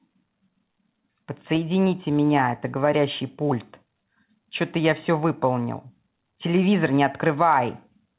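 Nothing goes wrong anywhere here; the speech just comes across the way it would on a G.711 A-law call at 64 kbps, with nothing above 4 kHz.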